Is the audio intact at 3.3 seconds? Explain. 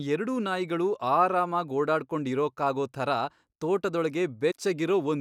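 Yes, at 3.3 seconds the speech plays through intact, with no fault to be heard at that moment.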